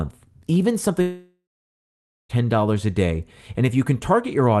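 At 1.01 s the speech breaks off. For about 1.3 s, until 2.31 s, nothing new is heard. First the last sound is stretched into a buzzy tail that fades out. The final 0.87 s or so is silence. The speech then resumes with that stretch simply missing. This is likely a long network dropout, with the receiver concealing the gap. The call codec cuts the treble near 12 kHz throughout.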